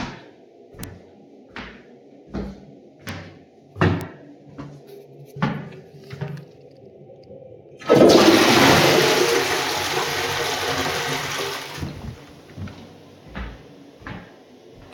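Single sharp ticks at 0.84, 3.09 and 4.01 s are bit error spikes: one flipped bit throws a lone sample to about -2 dBFS, then about -8 dBFS twice. Each is broadband and unrelated to the surrounding sound, unlike a dropout click, because nothing goes missing.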